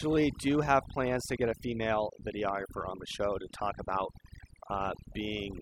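Throughout, the voice sits over a near-silent, twinkling background: overdone noise removal, with bands near the noise floor suppressed too hard, taking quiet speech detail too.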